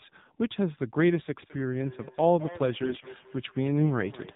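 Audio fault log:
throughout: AMR narrowband mobile codec. The speech sounds boxed in and telephone-like, with nothing above 4 kHz and a buzzy, synthetic edge that is plainly audible. Each 20 ms frame is rebuilt from a vocal-tract model fed by a few sparse pulses, so fine texture is replaced by a coarse approximation. The degree of buzz fits one of AMR-NB's lower modes, around 7.4 kbps, where too few bits remain to place pulses accurately.
1.43–4.36 s: feedback echo between two devices. From 1.43 s onward, every sound returns at intervals of about a fifth of a second. The repeats sound thinner and more ringing than the original, peaking about 18 dB below the speech. A second device in the room is replaying the call. Its sound reaches the first device's microphone and goes round again. The first device's echo canceller does not recognise this sound as its own output, so it passes through untouched.
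2.83–3.07 s: AMR bit errors. For roughly a quarter of a second the speech turns hoarse, scratchy and gargly, while its pitch and loudness stay roughly where they were. The timing points to a run of about a dozen consecutive frames arriving with corrupted low-priority bits, on the order of one bit in ten. Because the protected core bits still checked out, the decoder used these frames, so its driving pulses landed in the wrong places and its fine spectral values were off.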